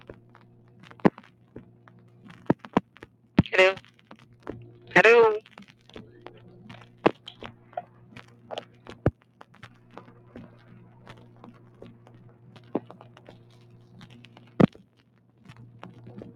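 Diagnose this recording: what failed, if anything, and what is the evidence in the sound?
The failure sits in the call-processing stage: a noise suppressor tuned for speech was left running on this material. It persists for the whole clip. Sustained tones and decay tails are pulled down shortly after each onset, while transients pass largely intact, so the level pumps and flutters with a swing of roughly 10 dB. The suppressor treats steady, stationary energy as background noise and attenuates it, thinning held sound and ambience.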